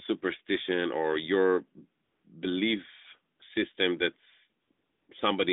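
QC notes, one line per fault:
2.04–2.24 s, 3.36–3.40 s, 4.62–4.70 s, 4.72–5.08 s: AMR comfort noise. The phone judged the pauses silent and stopped sending speech frames, so the narrowband background drops out and smooth synthetic hiss switches in for 200, 40, 80 and 360 ms.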